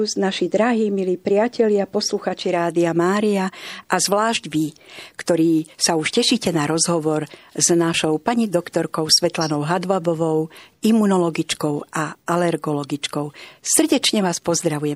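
Throughout the speech there is plainly audible MP3 compression, likely from a low-bitrate encode; the degree of damage fits something around 64 kbps. With too few bits, the encoder cuts the treble at a fixed frequency and drops weak spectral lines that blink in and out between frames. The result sounds watery and swirly, with metallic sibilants and smeared consonant onsets. A spectrogram shows a hard horizontal ceiling across the top and speckled holes in the upper bands.

At 7.93 s, between "tešíte na rozhovor s" and "pani doktorkou", damaged data in the compressed stream produces a brief blip. Corrupted bytes make the decoder misread a frame, lose sync and search for the next frame header. The waveform shows a tiny discontinuity, and the spectrogram shows a thin broadband vertical streak.

A second burst of damaged data, from 14.61 to 14.64 s, gives a short chirp or squawk. It appears as a slightly wider vertical smear on the spectrogram.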